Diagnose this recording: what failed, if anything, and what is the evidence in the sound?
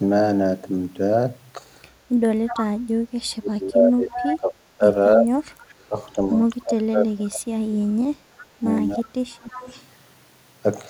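The failure sits in call processing, most likely an echo canceller on a loudspeaker side letting part of its pickup through. This is an echo leak. Short delayed copies of the speech appear at 2.46–2.64, 4.14–4.37, 8.97–9.03 and 9.52–9.83 s. Each lags its source by 322 ms and sits about 10 to 20 dB below it. A room reflection or reverb tail would smear continuously. These are brief, fixed-delay scraps returning from the far end.

The same stage also produced speech suppressed in double talk, likely because the canceller could not separate the local talker from loudspeaker echo while both sides spoke. The talker's level collapses in pieces at 3.01–4.85, 5.16–5.96, 6.64–8.63 and 8.96–9.57 s, with the deepest dips around 25 to 35 dB. Network dropouts would cut out regardless of the other side. These gaps track overlapping speech.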